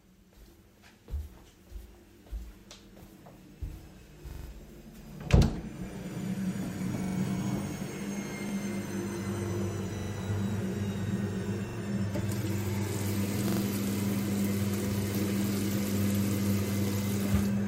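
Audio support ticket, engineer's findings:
Stutter bursts, the same 43 ms slice looping one to four extra times with hard seams, at 2.60, 4.31, 7.04, 8.49, 9.98, 11.69 and 13.48 s. Repeated buffer: the output device underran and replayed its last block, which fits a 2048-sample buffer.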